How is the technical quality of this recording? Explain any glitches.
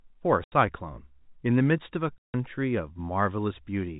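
The speech is marred by packet loss filled with silence, heard over a telephone-band G.711 channel. Packets failed to arrive and the receiver substituted nothing, so the speech drops out for about 80 ms at 0.44 s and 160 ms at 2.18 s, lengths that fit a 20 ms packet size, with abrupt edges.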